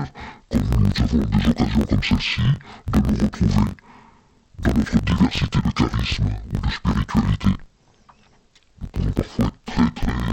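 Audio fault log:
throughout interleaved audio read as planar: each 21.33 ms block, which fits 1024 samples, splits its alternating left-right samples into halves played together at half speed. The sound drops an octave, doubled and choppy at 46.9 Hz, yet unlike a slowdown keeps its pace.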